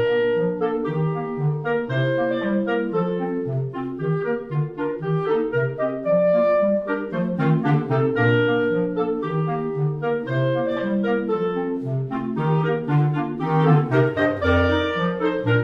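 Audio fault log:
No faults are audible anywhere in this clip.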